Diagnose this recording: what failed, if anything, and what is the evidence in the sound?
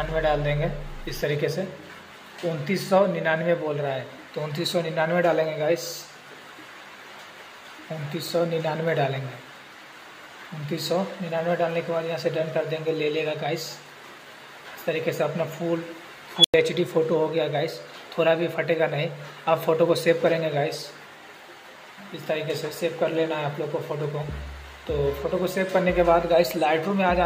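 An unstable filter in the processing chain failed at 16.37 s. A squeal of around 3 kHz swells for about 70 ms and clips, then the output drops to silence for about 96 ms until the filter resets, with the event over by 16.54 s. A recursive stage given bad coefficients feeds back without limit until its arithmetic overflows. On a spectrogram this shows as a bright narrow line near 3 kHz followed by a blank gap. The waveform shows an exponentially growing envelope, flat-topped clipping, then silence.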